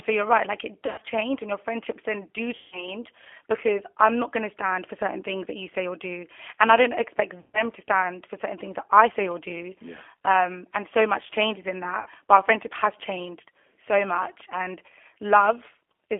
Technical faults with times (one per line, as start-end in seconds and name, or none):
0.00-16.19 G.729 codec
0.86-1.04 VoIP packet loss concealed by the speech codec
2.56-2.95 VoIP packet loss concealed by the speech codec
7.40-7.63 VoIP packet loss concealed by the speech codec
12.00-12.08 VoIP packet loss concealed by the speech codec